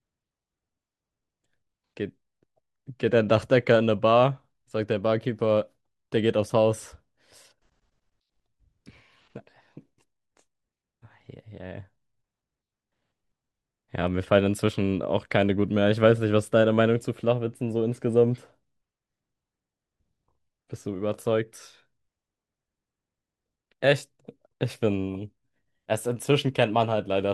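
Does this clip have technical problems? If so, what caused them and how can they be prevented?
No, this clip has no technical problems, so there is nothing to prevent.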